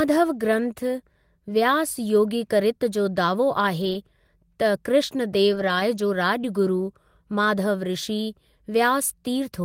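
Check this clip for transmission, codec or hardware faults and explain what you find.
There's one kind of fault here, at three points: lost packet rebuilt from error correction. It shows up at 1.95–1.97 s, 3.81–3.95 s and 5.51–5.81 s, lasting about 20, 140 and 300 ms. Packets went missing, and the decoder filled each hole from a low-bitrate backup copy carried in the next packet. So there's no dropout, just speech that turns briefly rough and noisy.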